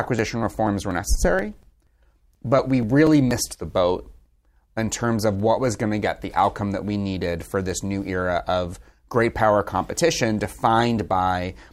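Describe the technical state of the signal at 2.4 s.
At 2.4 s the speech sits inside a run of periodic USB or driver dropouts from 0.19 to 3.55 s. Roughly 10 ms is skipped every 0.24 s, causing regular ticks, visible as evenly spaced waveform discontinuities and thin vertical spectrogram lines.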